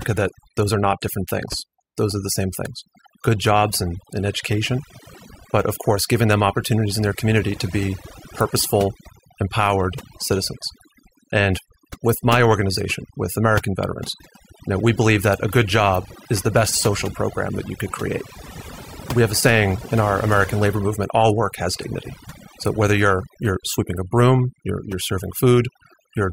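Overdone noise removal runs through the whole recording: the reducer was set too hard, pulling quiet bands under the noise estimate, so the background twinkles.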